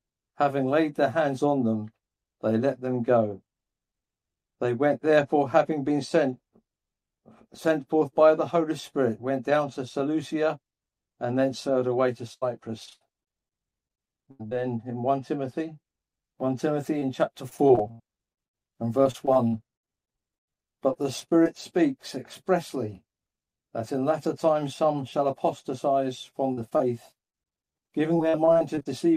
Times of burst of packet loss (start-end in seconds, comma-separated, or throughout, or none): 12.33-12.43